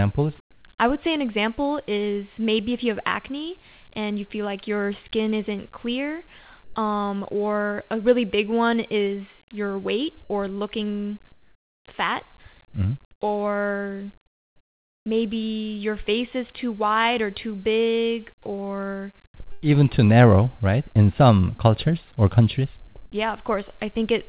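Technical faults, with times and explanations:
0.52–0.64, 6.64–6.76, 11.32–11.84, 13.12–13.2, 14.26–15.06 and 19.26–19.64 s: comfort noise in place of the background. In each pause the real background gives way to smoother synthetic noise. It appears at 6.64 s, after "your skin isn't clear" and before "um or a really", and last at 19.26 s, after "or too big or". This is likely from discontinuous transmission. The level shifts by about -4, +3, -11, +3 and -6 dB in turn.
19.52–19.64 s: burst of packet loss. A fill of about 97 ms stretches the last sound and fades it out, then the sound resumes with about 100 ms missing, just before "even too narrow right".
22.88–23.12 s: sound chopped by the voice detector. After "some cultures or countries", about 140 ms is replaced by comfort noise, likely because the detector switched off and on again, leaving holes in the sound. Across the clip the band stops at 4 kHz, as expected from a G.711 call path.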